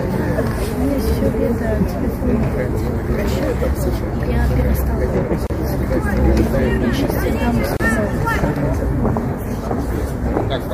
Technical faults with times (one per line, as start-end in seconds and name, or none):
5.47-5.50 gap at a join of encoded pieces
7.77-7.80 gap at a join of encoded pieces